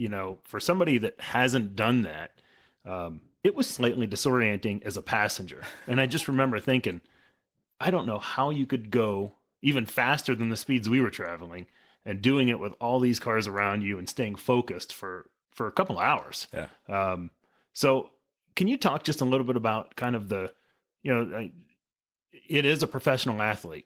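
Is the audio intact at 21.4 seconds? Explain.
Yes, at 21.4 seconds the speech plays through without any dropout, glitch or other fault.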